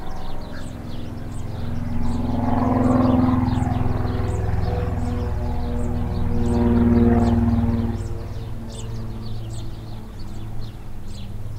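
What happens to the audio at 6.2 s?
Nothing goes wrong at 6.2 s; the sound carries straight through that moment with no dropout, click, distortion or other fault.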